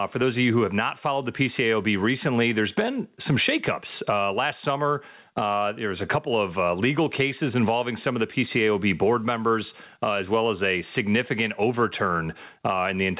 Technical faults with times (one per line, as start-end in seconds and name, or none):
0.00-13.20 gain pumping